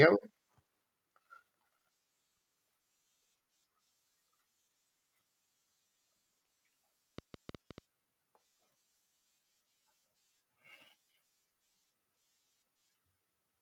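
A train of clicks runs through this speech clip from 7.18 to 7.79 s: about seven sharp, similar pulses at an uneven pace near 8.4 per second, standing well above the speech. Such pulses likely come from electrical interference or a faulty connection or power supply.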